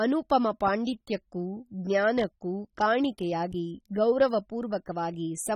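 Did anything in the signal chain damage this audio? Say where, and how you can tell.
Yes. The damage sits at the codec stage and runs through the entire speech clip. Sibilants come out fizzy and smeared, the sound has a warbling texture, and nothing remains above 19.1 kHz. The likely cause is AAC compression. Coarse AAC-LC quantisation like this fits a low bitrate near 27 kbps.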